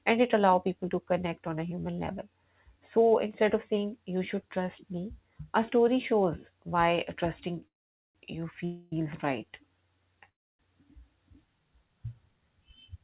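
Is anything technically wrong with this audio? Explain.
Yes. The speech stalls three times, at 7.67 to 8.16 s, 8.65 to 8.93 s and 10.29 to 10.60 s, each a call audio freeze. At the first and third, the last sound smears into a brief fading buzz and then near-silence for most of the gap. At the second, the held sound carries on for the full 0.27 s. Each time the speech resumes exactly where it stopped, with nothing lost, just pushed later. The likely cause is delayed packets draining the jitter buffer, so the receiver stretches the last audio until the packets arrive. The call path's narrow band, with nothing above 4 kHz, fits G.711 A-law at 64 kbps.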